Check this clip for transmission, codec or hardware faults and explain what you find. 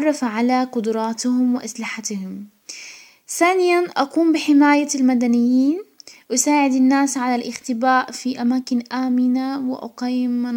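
No faults turned up when checking the clip.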